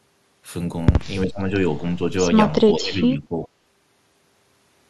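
A short speech clip where the talker's level keeps getting pulled down in patches: from 1.23 to 1.68 s it sinks by around 15 dB, there's a lighter dip of a few dB between 1.96 and 2.1 s, and from 2.57 to 3.5 s it drops hard again for about a second. That pattern is likely speech suppressed in double talk, with the echo canceller mistaking overlapping far-end audio for echo and turning the near-end talker down along with it.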